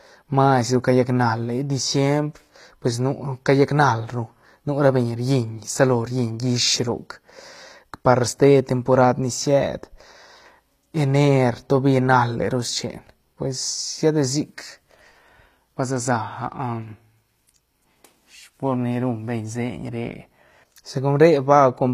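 HE-AAC compression runs through the whole speech clip, likely the cause of the plainly audible damage heard from start to end. The lower spectrum carries the real signal, while the treble is rebuilt by copying lower bands upward under a coarse envelope, so its harmonics fail to line up with those below. S sounds come out gritty and metallic, and nothing survives above 14.9 kHz. The amount of damage fits a rate around 24 kbps.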